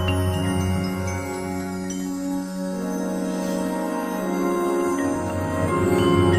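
No technical faults can be heard anywhere in this audio, and the signal holds steady throughout.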